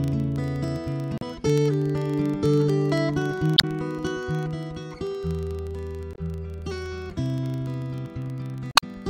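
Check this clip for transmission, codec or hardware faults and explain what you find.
Two faults are present: a steady low buzz across the whole clip, and four short corrupted bursts.

Throughout, a rough 25 Hz buzz of regular ticks rides on the sound and rises and falls with its level. This is a filter restarted on every block: it starts each 40 ms block from silence, so every block opens with a small transient.

At 1.17 to 1.23 s, 3.54 to 3.64 s, 6.12 to 6.18 s and 8.69 to 8.83 s, brief chirps or blips interrupt the audio. These come from damaged data in a compressed stream, where the decoder misreads frames, loses sync and jumps ahead to the next header.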